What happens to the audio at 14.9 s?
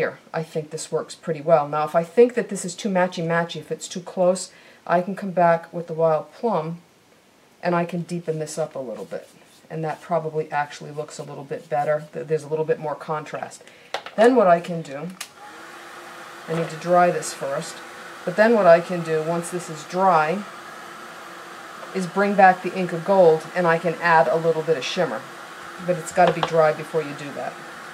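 Nothing goes wrong at 14.9 s; the audio plays through that moment intact, with no dropout, click or other disturbance.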